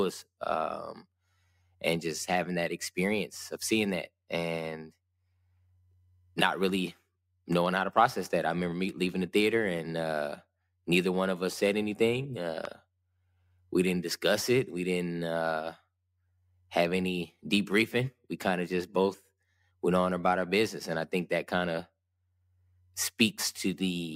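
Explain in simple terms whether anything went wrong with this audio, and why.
A single sharp loud pop, much louder than the speech, cuts in at 12.65 to 12.67 s, right after "of us said anything". It's likely a brief electrical jolt, such as a plug, switch or static spark.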